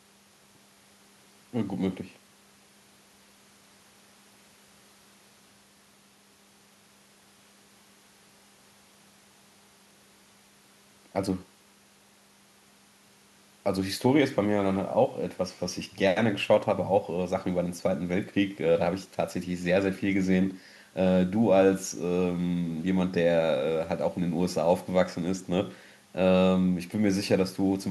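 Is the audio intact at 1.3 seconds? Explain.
Yes, the audio is intact at 1.3 seconds, with no dropout, click, distortion or other fault at that moment.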